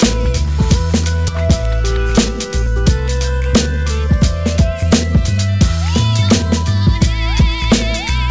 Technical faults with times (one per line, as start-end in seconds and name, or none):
1.28-1.30 skip ahead
3.40-3.85 jitter buffer speed-up